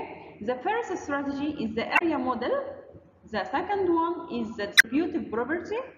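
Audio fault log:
1.95–2.02 s and 4.74–4.85 s, damaged data in a compressed stream: two short bursts of about 70 ms and 105 ms where the decoder was fed corrupted frames, misread them, lost sync and hunted for the next valid frame header. The misread frames come out as a brief chirp, squawk, click or short hole.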